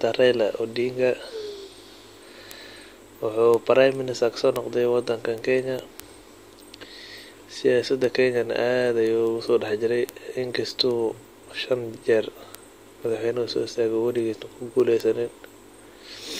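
From 0.27 s right through to 16.23 s the speech carries word clock ticks, sharp clicks landing at a steady rate of about one every fifth of a second, so around seventy in all. The receiving device is running on its own clock rather than locking to the sender's. With the two drifting apart by something like 100 ppm, each time they slip past one another a single sample gets dropped or doubled, and that glitch is the tick.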